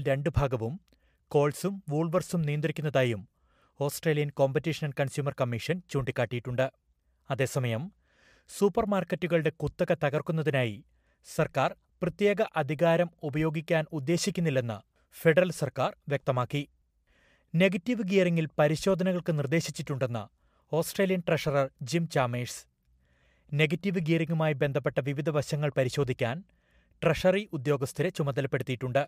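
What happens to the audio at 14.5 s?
Nothing goes wrong at 14.5 s; the audio plays through that moment intact, with no dropout, glitch or distortion.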